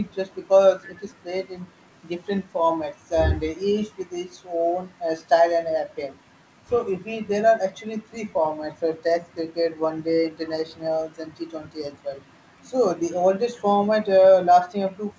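From 0.84 to 1.0 s a faint, delayed copy of the speech trails about 310 ms behind the original, far quieter than the direct sound and thinned by the band limit at 8 kHz. This echo leak likely comes from a far-end loudspeaker whose echo canceller let part of its microphone pickup return.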